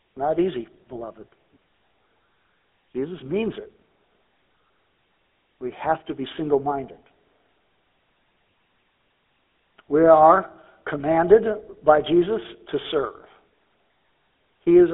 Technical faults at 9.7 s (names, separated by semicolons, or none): GSM full-rate codec